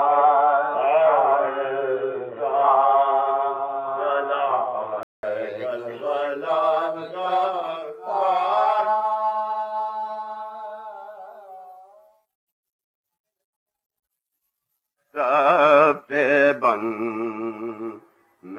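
From 0 to 5.23 s the sound is dull and boxy, with nothing above 3.8 kHz and a faint added noise floor, most likely from the input switched to a poorer device. A spectrogram shows a flat ceiling there, then a 200 ms blank gap before full bandwidth returns. The waveform level barely changes.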